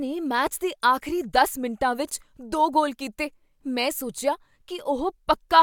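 No technical faults can be heard in this recording.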